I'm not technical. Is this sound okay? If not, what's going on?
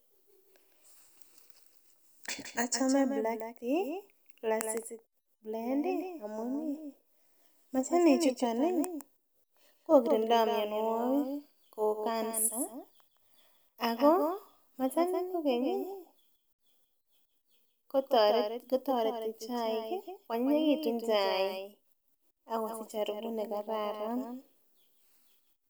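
No. Throughout the speech, every sound is heard twice. A second, quieter copy follows the first by roughly a sixth of a second. This is a doubled audio track. The copy is clean, with no fading tail or room sound, so it doesn't sound like an echo in a hall. It sounds like two recordings playing slightly out of step. The likely cause is the same sound being captured twice, once through a slower route.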